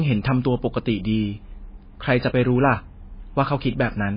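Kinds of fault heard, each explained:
MP3 compression: The speech here has nothing above 5 kHz and carries heavy coding damage throughout, most likely from MP3 encoding at a very low bitrate, roughly 19 kbps. Starved of bits, the encoder chops off the treble at a fixed cut-off and discards weak frequency lines, which drop in and out between frames. The result is a dull, band-limited sound with a watery, swirling texture, s sounds lose their bite, and onsets come across smeared.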